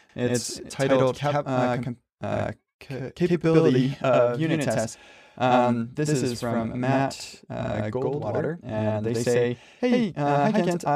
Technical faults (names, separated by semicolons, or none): channel delay (doubling)